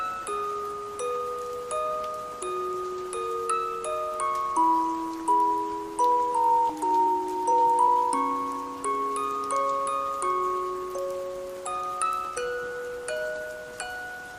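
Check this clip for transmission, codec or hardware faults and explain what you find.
Three transmission faults turn up: one skip ahead and two bursts of jitter buffer speed-up, all between about 6.7 and 9.2 s.

At 6.69 s there is a skip ahead. Roughly 0.7 s of audio was discarded, either lost in transit or dropped by an overflowing jitter buffer while later audio sat queued. Playback lands on that later material with no filler, so the sound jumps forward abruptly, its two sides spliced nearly seamlessly.

From 6.84 to 8.04 s, and again from 8.85 to 9.18 s, there is jitter buffer speed-up. The buffer was holding more than its target, and the receiver trimmed short pitch-period slices repeatedly to shed the excess, about 0.1 s in the first stretch and around 40 ms in the second. The audio runs about 9% and then about 11% fast at unchanged pitch, sounding rushed.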